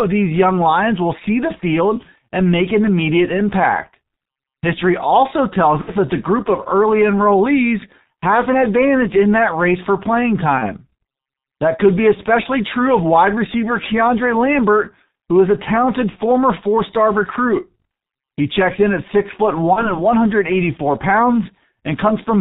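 Throughout, the speech carries heavy G.723.1 codec damage at about 6.3 kbit/s: it sounds muffled and hoarse, with blurred consonants. On a spectrogram, energy stops at a flat 4 kHz ceiling, and the harmonics look smeared because the coarse voice model changes only slowly from frame to frame.

VoIP packet loss concealed by the speech codec occurs four times: at 5.81–5.91 s, between "also tells" and "that the group of"; at 10.58–10.74 s; at 16.10–16.17 s, between "who is a talented" and "four star recruit"; and at 19.73–19.97 s, after "in at six foot". Each time, the decoder stretches its last pitch and filter into a buzzy tone or a coloured noise that fades. The first gap fits about 60 ms of missing audio and the others about 30 ms each, but the sound stays weak past the gap. On a spectrogram, this shows as frozen horizontal harmonic bands, and on the waveform as a tapering, repetitive envelope.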